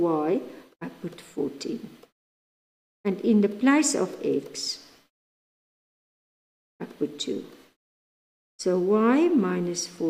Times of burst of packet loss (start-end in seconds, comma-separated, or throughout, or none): none